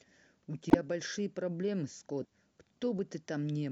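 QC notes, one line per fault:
0.70–0.76 s and 2.19–2.25 s, compressed frames skipped: whole coded frames never reach the output, so the speech leaps ahead, about a tenth of a second at the first point and about a fifth at the second.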